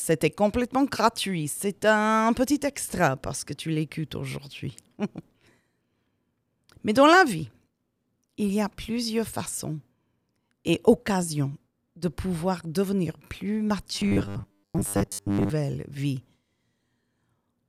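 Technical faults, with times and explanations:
13.96–15.50 s, robotic sound from repeated short buffers: after "de pouvoir devenir plus", speech turns into a rigid, metallic 100 Hz buzz, likely from a 10 ms buffer replayed over most of that stretch.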